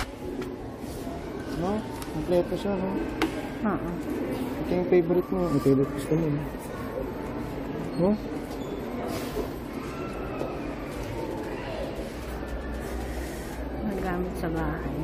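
The audio signal carries no audible technical faults at any point.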